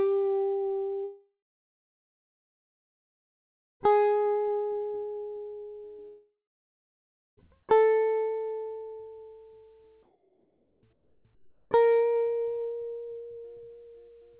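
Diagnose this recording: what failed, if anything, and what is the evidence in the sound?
Network stage, long network dropout: the music stops at 1.04 s and returns at 3.82 s with about 2.76 s missing, then again from 6.08 s to 7.39 s with 1.3 s gone. A brief fading continuation gives way to silence (about 2.5 s and 1 s), which likely points to lost packets rather than a muted output.

Call processing, comfort noise in place of the background: at 10.03–10.83 s, 10.93–11.25 s and 11.35–11.71 s, the quiet background, about 41–44 dB below the loudest passages, becomes a steady, featureless hiss about 4–5 dB lower. Unlike a dropout, the gap is likely filled with synthetic noise, with no fade to silence.

Call processing, onset clipped by the voice detector: at 11.23 s the music resumes abruptly, with roughly its first 20 ms replaced by comfort noise, so the soft attack is missing. This is likely a late transmission decision at the sender, not lost audio mid-note. 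Throughout, nothing is heard above 4 kHz, consistent with a narrowband G.711 call codec.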